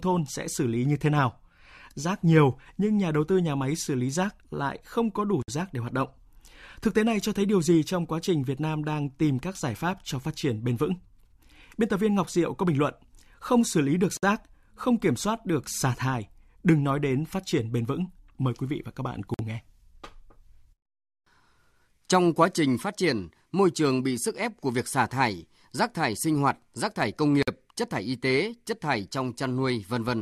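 Gaps at joins of encoded pieces occur at 5.42 s (after "lại không có đủ"), 14.17 s, 19.34 s and 27.43 s. Separately encoded segments were spliced without trimming their start delay and end padding. This leaves 50 to 57 ms silences with smeared edges before the speech resumes.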